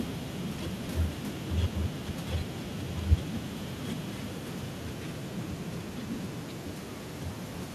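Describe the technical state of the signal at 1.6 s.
At 1.6 s the speech signal is intact, with no audible dropout, distortion, clipping or other technical fault at that point.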